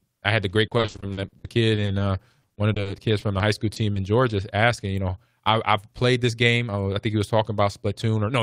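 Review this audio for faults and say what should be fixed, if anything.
Packets were repeatedly lost or arrived late, producing repeated packet loss (robotic sound) in two stretches. From 0.67 to 2.02 s, just after "I had the great", fifteen gaps occur, the longest 60 ms. About 420 ms was patched by stretching the previous sound and 340 ms is simply missing, so 31% of that span is concealed. From 2.42 to 3.98 s there are nine gaps, the longest 40 ms, with 200 ms filled and 120 ms missing (13%). Both stretches sound choppy, with pieces missing. A more robust network path or forward error correction would prevent this.

From 5.77 to 6.69 s, right after "asking you know I", a jitter buffer speed-up occurs. Delayed packets arrived in a bunch and the buffer held more audio than its target, so the receiver trimmed short pitch-period pieces, around 70 ms in total, to catch up. The speech plays at about 106% speed with unchanged pitch and sounds hurried. 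Steadier packet delivery or gentler buffer adaptation would avoid this.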